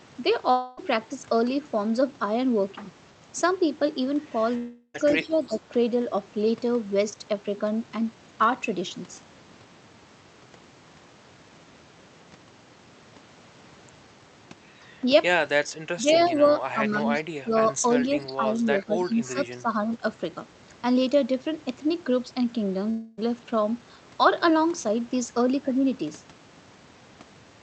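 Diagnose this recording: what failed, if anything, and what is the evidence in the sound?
Long network dropouts at 0.51 to 0.79 s, 4.57 to 4.96 s and 22.90 to 23.19 s, likely at the network stage. Each gap is filled by a fading buzz continuing the last sound. The second ends in a brief silence. The sound then resumes with that stretch missing.

Speech suppressed in double talk, in call processing, at 5.23 to 5.52 s, 15.95 to 16.35 s, 16.73 to 17.04 s, 17.44 to 17.83 s and 18.14 to 19.71 s. The talker dips by about 10 to 15 dB in pieces, likely because the echo canceller attenuated both directions while both sides were talking.

Echo leak, also in call processing, at 5.48 to 5.58 s, 17.14 to 17.23 s and 18.80 to 19.34 s. A faint copy of the sound returns 338 ms late, about 20 to 25 dB down. This is likely loudspeaker pickup that the canceller failed to remove and sent back across the Opus call path.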